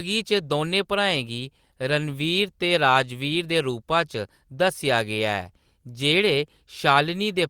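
Speech recording, with no technical faults to report.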